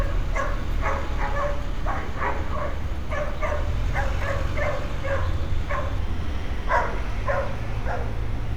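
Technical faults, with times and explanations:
5.99 to 8.56 s, section at the wrong speed: from 5.99 s the sound abruptly slows and sinks by about two semitones, running at 0.893 times its proper rate to the end. Pitch and pace fall together, so this part was likely played against the wrong clock.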